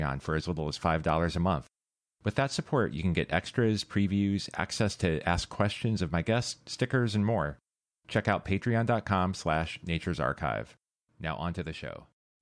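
A speech recording, and nothing is technically wrong with it.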